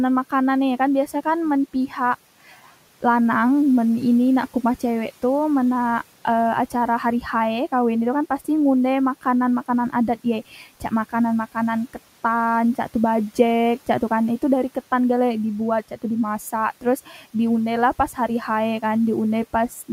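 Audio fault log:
10.51–10.92 s and 17.06–17.35 s, speech cut by the noise suppressor: soft speech treated as noise, dropped about 8 and 9 dB, sounding swallowed; brief waveform dips, faded speech energy on spectrogram.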